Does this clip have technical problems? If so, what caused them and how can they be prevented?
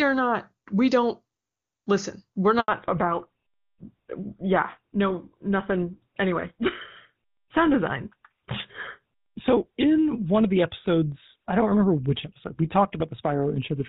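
Yes. At 2.60 s the sound dies away and stays silent until 2.68 s, an 80 ms handover gap. The call was being passed from one network link to another, and for that interval no speech frames reached the receiver. The decoder had nothing to play, so the audio fades within a few tens of milliseconds and whatever was said in that stretch is lost. Keeping the handset in stable coverage, or using a network configuration that completes handovers without interrupting the frame stream, prevents this kind of gap.

From 2.68 s to the end there is a fallback to narrowband. Before the gap the AMR wideband (HD Voice) codec carries content up to about 7 kHz and sounds clean, consistent with its highest 23.85 kbit/s mode. After the handover nothing is present above 4 kHz, so the sound turns dull and rougher. That fits the call continuing on an older narrowband codec such as GSM full rate after it moved to the new network. 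Ensuring both ends and every network segment along the path support and negotiate AMR-WB keeps the call from dropping to narrowband.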